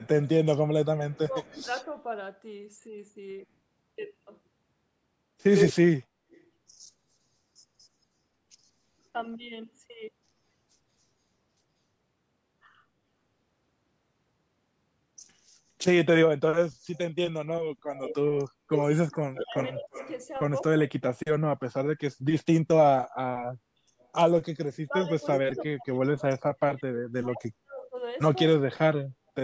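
Speech with a delayed second copy of the talker running behind it at several points. From 0.0 to 1.84 s the copy trails by about 190 ms and sits faint, about 25 dB under the main voice. From 5.55 to 6.41 s it trails by 189 ms and is about as loud as the speech itself. From 16.95 to 20.85 s and again from 24.0 to 25.62 s it lags by about 340 ms at about 15 dB down. This is an echo leak, most likely from a far end on loudspeaker whose echo canceller let part of the returning sound back into the line, with the shift from 190 to 340 ms pointing to a change in that echo path. Alongside this, the talker's own level sinks in patches. From 0.43 to 1.9 s the dips reach roughly 15 dB and add up to about a second. From 16.67 to 29.4 s the drops are much deeper, up to roughly 40 dB, and cover around five seconds in all, so stretches of speech nearly vanish. That is speech suppressed in double talk: with both ends sounding at once, the canceller likely could not separate the talker from the echo and pulled everything down. 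Separately, the room sound briefly ducks from 23.54 to 23.72 s, falling about 13 dB for roughly a fifth of a second before returning. That is background gated by the echo canceller clamping the microphone while the loudspeaker played. The top end stops at 8 kHz, the expected result of the call's microphone processing.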